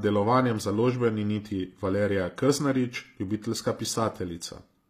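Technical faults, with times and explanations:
Throughout, HE-AAC compression: the speech has a gritty, metallic treble, with s sounds that lisp and nothing above about 14.9 kHz. This fits a low bitrate near 24 kbps, where the treble is likely rebuilt by copying lower bands upward, so its harmonics fail to align.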